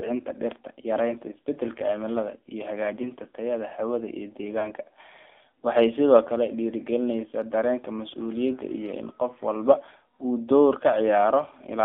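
Throughout, AMR narrowband mobile codec coding confines the speech to roughly 300 Hz to 3.6 kHz, with a buzzy, synthetic timbre pointing to a low mode near 7.4 kbps. A spectrogram shows a hard ceiling with nothing above it.

From 3.02 to 3.08 s and again from 4.60 to 4.72 s, lost AMR speech frames cause brief warbly dips, each fitting a single lost 20 ms frame concealed by repeating the previous one at falling gain. The waveform shows sagging amplitude there, and the spectrogram shows smeared, held harmonics.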